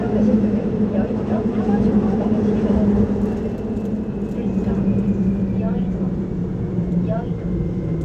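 No technical faults can be heard anywhere in the sound.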